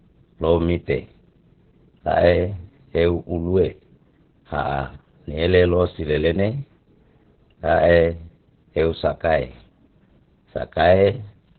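From start to end, the speech carries heavy Opus voice compression. Nothing sounds above 4.2 kHz, so it is narrowband and muffled. The coarse linear-prediction coding makes it hoarse and slightly robotic. That damage fits the SILK mode at roughly 8 kbps.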